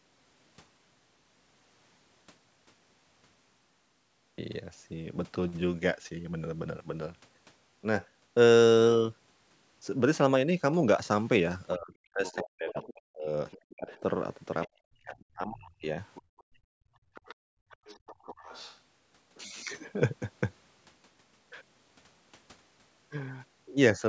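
From 11.75 to 14.03 s the talker's speech keeps sinking and breaking up. This is speech suppressed in double talk: both ends were talking at once, and the echo canceller, likely unable to tell the local talker from the loudspeaker echo, turned everything down. The worst dips go down by something like 40 dB, and about a second and a half of speech is lost in pieces. It happens again from 14.81 to 15.86 s, with roughly a second chopped away.

Meanwhile, the other side's voice leaks through at 12.26–12.93, 13.51–13.97, 14.62–14.68, 16.04–16.43 and 17.14–18.79 s. The far-end talker plays on the local loudspeaker, and what the canceller failed to remove reaches the microphone, likely as residual echo. It sits well under the main voice, around 20 to 25 dB down, and comes through as a faint second voice. The 14.62 s bit is only a blip. The 17.14 s stretch runs for over a second and a half.

From 16.22 to 18.26 s the background is gated by the echo canceller. 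While the loudspeaker is active, the microphone gets clamped hard, so the room sound drops by about 34 dB in spells adding up to roughly a second and a half, then comes back when the canceller releases. Through all of it, the call processing's high-pass and its 8 kHz top are just normal call bandwidth.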